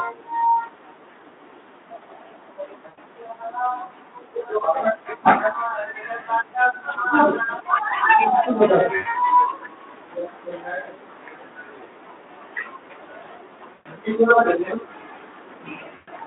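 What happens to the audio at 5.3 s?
At 5.27 to 5.32 s the speech hits hard clipping. The peaks are driven about 6 dB past what the signal path can carry, so their tops are sliced flat. That adds high harmonics, heard as a brief harsh crackle on the loud sound.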